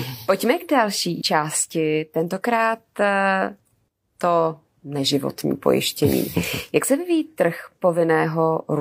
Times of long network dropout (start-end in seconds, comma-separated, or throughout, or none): none